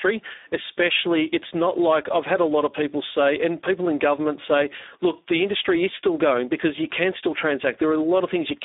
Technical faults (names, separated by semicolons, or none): Speex codec